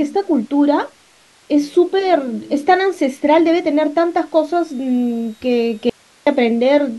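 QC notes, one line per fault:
5.90–6.27 s, audio dropout to a faint residue: the speech cuts off abruptly mid-flow for about 0.37 s, leaving only hiss at roughly 35 dB below the normal level, then returns just as suddenly. The likely cause is a brief loss of the incoming signal while the recording path stayed live, so its own noise floor carried through the gap. Unlike a natural pause or fade, the edges are instant and the gap holds steady hiss rather than room tone.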